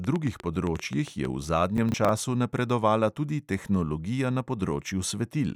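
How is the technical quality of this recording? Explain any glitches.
There are two clear glitches in this speech recording, both in the first half.

From 0.04 to 1.26 s there's a train of clicks, about ten of them at roughly 7.5 per second, spaced unevenly. They're similar in shape and stick out well above the speech, so you hear a ticking that sits on top of everything. Something is likely injecting short pulses into the signal path, such as interference from nearby gear or a faulty connection or power supply.

From 1.77 to 2.09 s you get processor overload crackle. The system isn't finishing its audio buffers on time, and each miss replays a scrap of old audio with hard edges. The sound points to buffers of around 10 ms, with something like seven missed. The result is a short burst of gritty, torn-sounding crackle over the speech, and it stops once the load eases.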